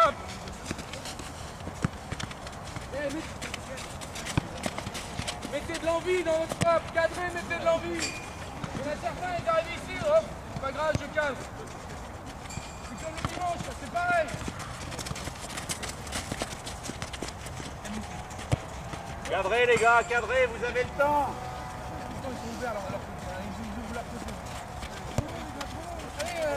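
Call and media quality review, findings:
Sample clock jitter, 20.94 s to end (26.57 s). Hiss and roughness riding on the signal, heavier on loud and bright passages, gone in gaps. Unstable converter clock, timing wobble of several microseconds. Slope-dependent error roughly 25 dB below the signal.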